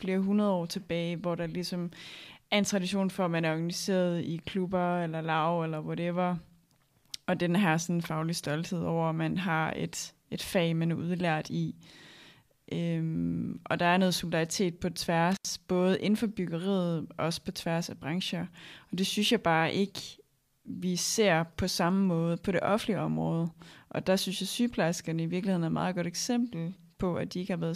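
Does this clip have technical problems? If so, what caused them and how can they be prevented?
Yes. At 15.32 to 15.50 s, just after "er noget solidaritet på" and before "både inden for byggeriet", the speech drops out for about 79 ms with crackle at both edges: an intermittent contact, a loose cable or plug briefly opening the signal path. Secure and inspect connectors before recording.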